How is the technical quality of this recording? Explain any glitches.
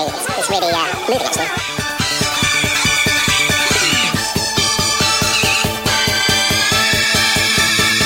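The technical quality is poor, because the entire recording plays back at the wrong rate. From start to finish it has the fault of audio read two samples at a time (double speed): the reader treats each pair of samples as one frame, so everything runs at 2.0 times its proper speed and sits an octave too high. On a spectrogram, all features are doubled in frequency and compressed in time.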